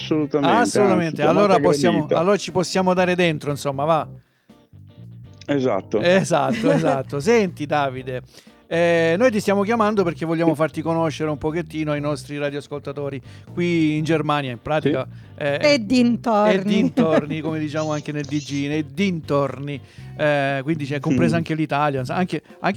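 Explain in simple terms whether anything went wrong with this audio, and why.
Nothing went wrong with this audio: the signal holds steady throughout, with no interruptions, distortion, or sudden changes in level anywhere in the recording.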